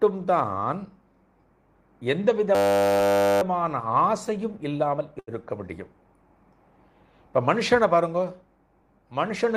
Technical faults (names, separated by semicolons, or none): system hang loop; short stall from a late packet